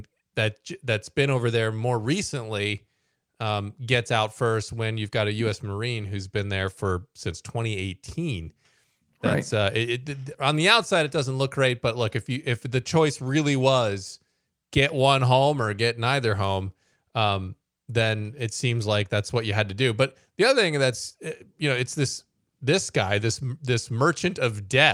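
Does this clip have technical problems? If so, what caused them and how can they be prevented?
No, nothing technical stands out anywhere in this speech recording, so there's no fault to trace or guard against.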